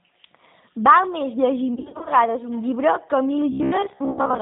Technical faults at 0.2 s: G.729 codec

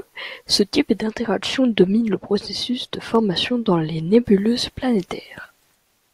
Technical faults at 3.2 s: de-emphasis applied wrongly; dropped samples

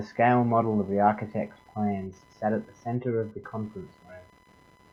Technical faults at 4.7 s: computer activity noise

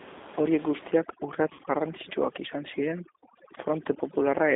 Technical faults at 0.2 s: G.729 codec

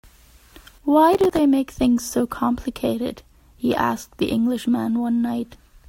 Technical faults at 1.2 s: processor overload crackle

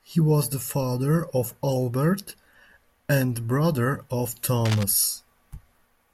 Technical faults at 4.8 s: cable scratch noise

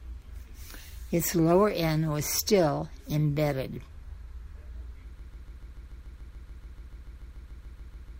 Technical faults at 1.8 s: none

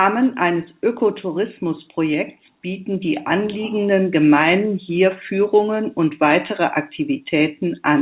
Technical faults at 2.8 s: none

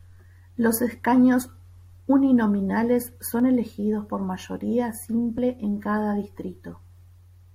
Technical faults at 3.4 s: overlap between stream segments

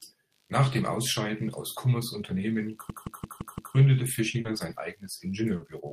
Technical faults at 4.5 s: computer activity noise; short concealed packet loss; lost packet rebuilt from error correction

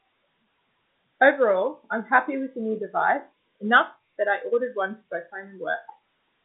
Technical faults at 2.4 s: none

